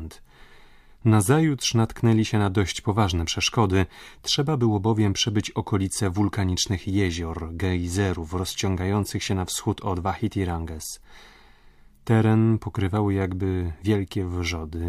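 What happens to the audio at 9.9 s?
At 9.9 s the speech is inside an adaptive stream at a lower bitrate, running from 6.33 s (after "było bowiem przebyć okolice") to 12.33 s (before "pokrywały jakby"). The player switched to a leaner stream, about 40 kbit/s HE-AAC. Unlike a dropout, the quality changes abruptly with no gap.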